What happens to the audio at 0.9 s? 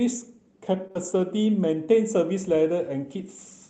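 A packet arrived late at 0.87 s, so the jitter buffer ran dry and the receiver had to improvise until it turned up. This short stall from a late packet, lasting to about 0.92 s, holds the last speech sound for roughly 21 ms before playback resumes from the same spot. Nothing is dropped, but everything afterward plays about 21 ms later, and the held sound carries a slight buzz or dip where it should have moved on.

Right after that, from 0.92 s to 0.97 s, comes a short concealed packet loss: about 40 ms of the Opus stream never reached the decoder in time, and the receiver synthesised a continuation of the preceding sound to cover the gap before blending back into real audio. You hear a brief smear or wobble in the speech.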